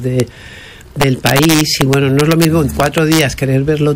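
Integer overflow appears at 0.2 s, then from 1.02 to 2.45 s and from 2.80 to 3.21 s. Samples that should have been held at the top of the integer range wrapped around to the opposite extreme instead. At 0.2 s the peak sits right at the limit, giving a single crack. The later passages are driven about 3 dB and about 2 dB over, so every loud peak flips across the full range and produces violent, snapping cracks far harsher than clipping.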